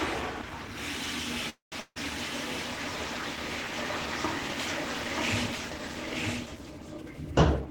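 The clip is a recording of everyday sounds, and throughout, a listener hears a second copy of everything trailing about a second behind, roughly 5 dB quieter, with no reverberant tail or room colouring of its own. This doubled audio track runs the whole length of the recording. It is most likely the same audio mixed in twice, with one copy captured late by a slower path or an edit leaving two copies out of step. At 1.49 s the sound stops moving forward and the last moment is stretched into a fading buzz or hiss. About 140 ms of that fill is near-silence before the audio resumes at 1.74 s, exactly where it left off. This call audio freeze likely comes from packets held up in transit until the jitter buffer ran dry. The receiver bridged about 225 ms and lost nothing, but everything after it now sits about 225 ms later. Just after, from 1.80 s to 1.98 s, another fading fill appears, ending in about 50 ms of silence. 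This time, when the sound returns, roughly 160 ms has been skipped. That points to a long network dropout, likely one where packets never arrived, so the gap was concealed and the missing stretch was never played. Near the end, between 6.97 s and 7.15 s, the sound suddenly rushes forward at about 162% speed while its pitch stays the same. This is a jitter buffer speed-up: the receiver had built up more delay than it wanted and cut short pitch-period-length pieces in quick succession, removing about 100 ms to catch up.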